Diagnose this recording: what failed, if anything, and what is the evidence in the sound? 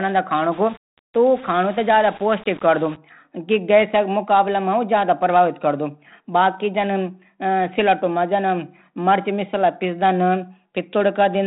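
From 0.51 to 2.96 s the speech turns grainy, with a gritty distortion that rides along with the level and gets worse on the quiet bits, clearing up right before "कि गैस". That's the signature of low bit depth without dither, most likely a sample-format conversion that rounded down to about 6 bits with no dither added. The rounding error tracks the signal, sitting only around 25 dB under it. The 3.9 kHz telephone band is still there underneath the grit.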